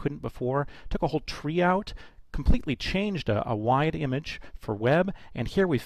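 No technical faults can be heard anywhere in the audio; there is no interruption or disturbance to the sound.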